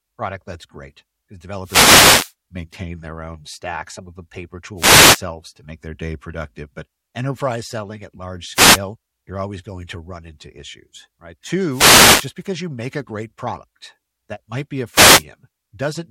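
Radio signal fades on an analogue wireless microphone in this speech clip cause five wireless microphone noise hits, each a swish or burst of static: 1.62–2.34 s after "product that's great because", 4.76–5.22 s, 8.53–8.79 s, 11.68–12.32 s, and 14.92–15.24 s after "that might be a".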